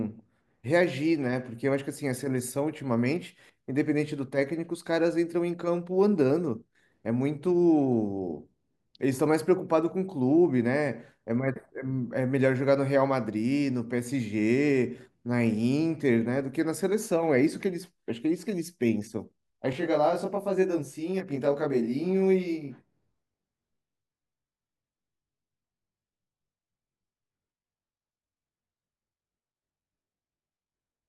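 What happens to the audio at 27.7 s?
At 27.7 s the audio is inside a stretch of channel delay (comb filtering) that runs from 19.73 s to the end. One channel lags the other by about 20 ms, and summing them to mono cancels regularly spaced frequencies from around 20 Hz upward, leaving the speech rough and slightly doubled.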